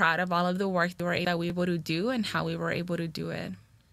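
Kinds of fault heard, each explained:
Chunks out of order, 1.0 to 1.5 s: a 250 ms chunk arrives one chunk late, so two pieces of speech swap places, jumbled, with three hard joins.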